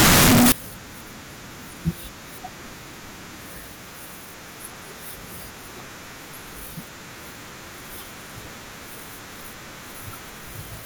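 From 0 to 0.52 s the speech turns into a loud, harsh, almost square wave at a high, almost fixed level, with background noise as loud as the voice. The likely cause is float read as integer: 32-bit float samples decoded as 32-bit integers. Unlike ordinary clipping, quiet passages are just as loud.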